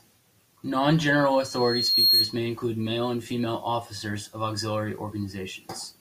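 From 1.31 to 2.40 s, loudspeaker feedback squeal: the microphone-loudspeaker loop exceeds unity gain at 4.3 kHz, swelling over most of a second to about 10 dB above the speech.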